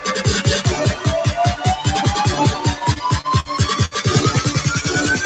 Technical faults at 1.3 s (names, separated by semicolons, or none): noise suppressor applied to music or sounds